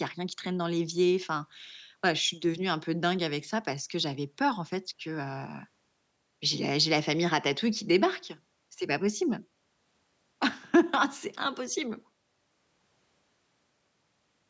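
No technical faults are present in the speech: the signal shows only the expected effects of call microphone processing, with the lowest bass removed by its high-pass filter and no content above 8 kHz.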